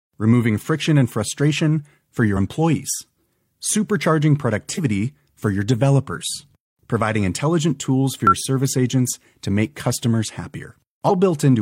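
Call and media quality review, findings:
Damaged data in a compressed stream: brief glitch at 4.74–4.80 s (just before "for your developers providing") and a blip at 8.27 s (between "providing intelligent tools for" and "service agents to make"). Decoder misreads corrupt frames and resyncs. Spectrogram shows broadband vertical smear; waveform shows an abrupt discontinuity.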